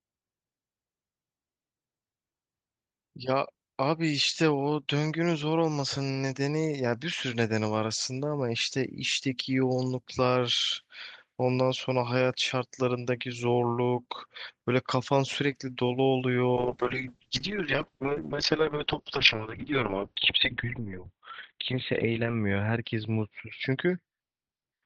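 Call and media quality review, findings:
Call bitrate drop, 16.57 s to end: speech goes muffled and coarse, top end 12 kHz down to 4 kHz. Fits Opus squeezed to around 9 kbps after a bandwidth-estimate dip.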